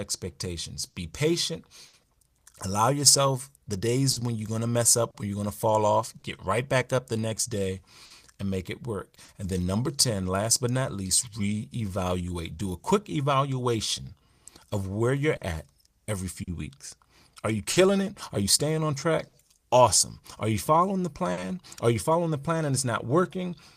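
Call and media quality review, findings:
Clock drift between sender and receiver, whole clip. Sender clock runs about 4 percent slow against the receiver. Jitter buffer keeps draining. Receiver compensates by stretching and briefly holding speech. Result: recurring small timing hiccups at uneven intervals throughout.

Short stall from a late packet at 0.89–0.95 s, 1.87–1.95 s, 8.05–8.12 s, 9.24–9.30 s and 21.32–21.39 s. Each is a held sound of 40 to 60 ms with a slight buzz or dip. Jitter buffer ran dry. Last sound was extended until the packet arrived. No speech lost.

Repeated timing corrections from 3.32 to 23.51 s. Playout runs at 98 percent speed. Receiver repeats short slices, adding roughly 0.4 s in total. All edits stretch in the same direction and are unevenly spaced. Heard as a slightly dragging, unsteady tempo.

Scattered short gaps from 4.12 to 6.24 s, about three, the longest around 40 ms. 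Another stretch from 15.36 to 19.35 s, about four, the longest around 50 ms. Late or lost packets were concealed by continuing the previous sound. Heard as brief smears and ticks, with nothing cut out.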